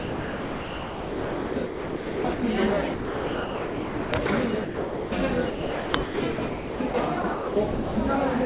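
From 0 to 2.42 s the everyday sound is chopped by the voice detector. The sender likely switched transmission on and off several times, so 2.22 s in total was replaced with comfort noise. The result is choppy.

From 2.94 to 4.12 s, and again from 4.64 to 5.12 s, the sound is dropped by the voice detector, which likely took it for background. The sound gives way to steady comfort noise for 1.18 s and then for 0.48 s before returning.

Chopping recurs from 5.5 to 6.94 s, with 1.04 s replaced, and from 7.22 to 7.96 s, with 0.48 s replaced. Both stretches likely come from the same detector gating and give the same broken texture.

Throughout, the call path carries nothing above 4 kHz, which fits a narrowband telephone codec.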